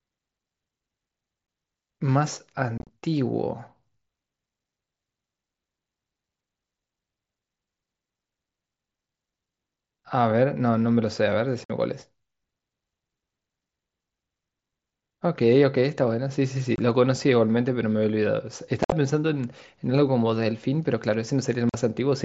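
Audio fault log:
1.47 s, 2.78–2.89 s, 11.64–11.70 s, 16.76–16.78 s, 18.83–18.92 s, 21.69–21.74 s: unconcealed Bluetooth headset packet loss. Headset packets never arrived and silence or an idle pattern replaced them, leaving holes of up to 52.5 ms with abrupt edges. At 2.78 and 18.83 s the losses scatter, chopping the mSBC-coded speech.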